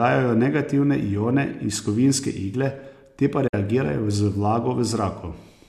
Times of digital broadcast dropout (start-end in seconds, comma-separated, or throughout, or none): 3.47-3.54